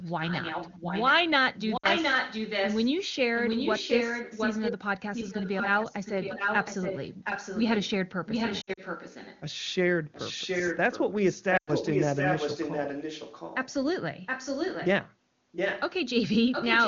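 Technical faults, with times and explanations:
0.01–2.99, 3.35–4.73, 5.06–7.90, 8.26–9.41, 10.12–13.74, 14.26–14.88, 15.52–15.81 and 16.51–16.88 s, echo leak: a second copy of the talker trails the original by 0.72 s, about as loud as the direct sound at the start and around 15.5 s, and elsewhere about 5 dB quieter. The likely cause is a far-end loudspeaker whose echo canceller let its microphone pickup through. On a spectrogram each syllable's harmonic pattern repeats 0.72 s later; the waveform shows doubled envelopes.
1.77–1.87, 8.61–8.80 and 11.57–11.70 s, lost AMR speech frames: the speech briefly drops to near silence within two frames, then comes back weak or rough for a moment. This happens because the decoder is repeating its last good pitch and vocal-tract settings with falling gain. The gaps are about 60 ms, then 100 ms spread over 160 ms (longest run 60 ms), then 100 ms. Those lengths fit runs of 20 ms frames. 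On a spectrogram the harmonics flatten into static horizontal bands and fade. The waveform shows a repeating cycle shrinking in amplitude, then a weak restart.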